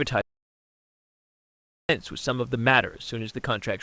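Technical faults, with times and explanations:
0.21–1.89 s, audio dropout to silence: the speech cuts off abruptly and returns just as abruptly about 1.68 s later, with silence in between. Even the room noise, about 38 dB below the speech, disappears, so the input itself was lost, likely through a device disconnect, a broken link or a stray mute, while silence kept being written. Whatever was said in that stretch is gone, and the band-limited call sound, with nothing above 8 kHz, resumes unchanged afterwards.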